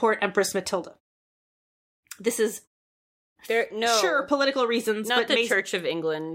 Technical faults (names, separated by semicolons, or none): none